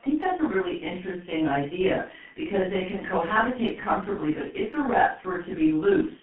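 From start to finish, the speech carries G.723.1 codec damage, and it is heavy. The audio lives only between 150 Hz and 3.4 kHz, so there is no low body and no air on top. The codec rebuilds the voice from a coarse model refreshed in 30 ms frames, which fits a bitrate around 6 kbit/s. That slow update smears quick changes. Consonants blur together. Vowels sound muffled and hoarse.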